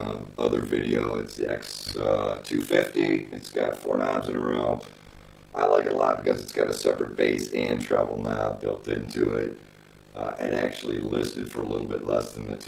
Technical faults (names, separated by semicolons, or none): overlap-add ripple